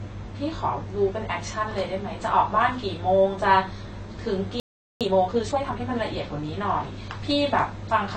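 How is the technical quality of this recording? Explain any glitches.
The recording has three audible problems: plainly audible codec damage throughout and a brief dropout followed by a hurried stretch.

Likely AAC compression discarded detail to save data, which fits a low bitrate around 24 kbps, so the speech sounds dull, smeared and fizzy.

A playback stall, likely from the output being starved of data, ran from 4.60 to 5.01 s, leaving about 0.41 s of silence.

Time-compressed catch-up then trimmed and cross-faded small slices to recover the backlog, so from 5.01 to 5.81 s speech runs 1.5 times fast at normal pitch.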